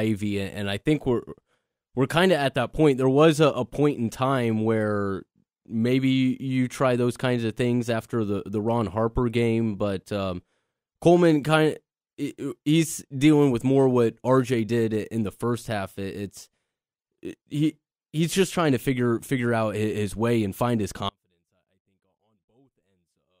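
A likely break in the signal feed, with the path after it still live, produces an audio dropout to a faint residue from 21.1 s, just after "way and find his", lasting to the end of the clip. The speech cuts off abruptly rather than pausing or fading, and what remains is only a faint leak of sound roughly 40 dB below the normal level, barely audible beneath the point where the speech stopped.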